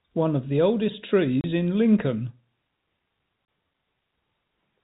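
Right after "of the oldest", at 1.41 s, the speech drops into a hard 30 ms hole, and again at 3.45 s. That's packet loss filled with silence. Each gap fits one 30 ms packet going missing, over an otherwise narrow G.711 telephone band.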